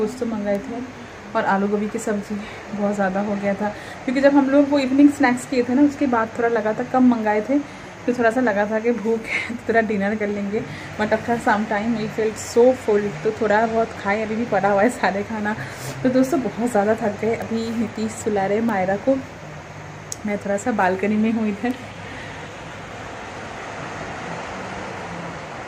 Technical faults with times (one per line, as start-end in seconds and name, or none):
0.55 bit error spike
17.42 bit error spike
18.69 bit error spike
21.71 bit error spike